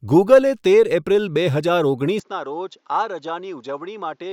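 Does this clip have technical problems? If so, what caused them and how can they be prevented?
Yes. At 2.2 s, right after "તેર એપ્રિલ બે હજાર", the speech turns duller and quieter to the end, with no gap. Nothing remains above 7.3 kHz, and a faint new noise floor appears. This is likely an input switched to a poorer device. Locking the recording to one fixed microphone prevents it.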